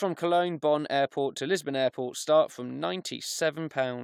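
Speech, with no technical fault to report. Nothing in the recording calls for a time stamp or a cause.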